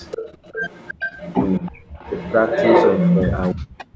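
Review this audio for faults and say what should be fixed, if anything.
Echo leak, 0.00 to 3.32 s: a second copy of the speech trails the original by about 331 ms, nearly as loud as the talker, so the sound doubles into a smeared slap-back across most of the clip. This is likely a far end playing the call over a loudspeaker, where the echo canceller failed to subtract what its microphone recaptured and returned it down the line. To prevent it, the far end should use a headset or retune its echo canceller so its filter converges on the room path.

Speech suppressed in double talk, 1.60 to 1.64 s and 3.52 s to the end: at 1.60 s the speech briefly dips by a few decibels, and from 3.52 s it falls away almost to silence. The likely cause is that both sides were talking at once and the echo canceller, unable to tell the local talker from loudspeaker echo, attenuated everything. To prevent it, the suppressor's double-talk detection should hold off attenuation while the near-end talker is active.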